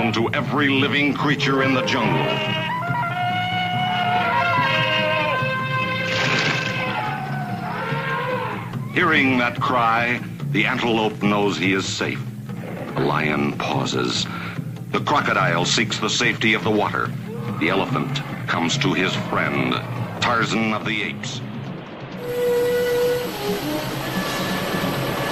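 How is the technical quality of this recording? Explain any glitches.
The technical quality of this recording is sound, with no glitches to explain.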